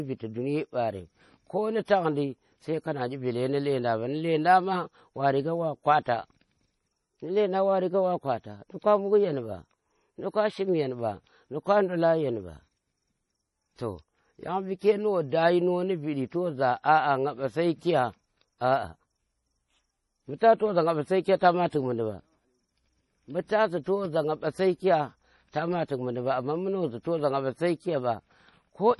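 Throughout, the speech has nothing above 11.4 kHz and a heavily watery, swirling texture, with sibilants turning metallic. This is likely MP3 compression at a very low bitrate, around 32 kbps, where the encoder cuts the treble and drops weak frequency lines frame by frame.

From 1.85 to 1.88 s, a pre-echo appears: a short hiss precedes a sharp onset by about 29 ms, and the attack itself sounds softened. The transform block's quantisation noise, scaled for the loud attack, has spread into the quiet moment just before it.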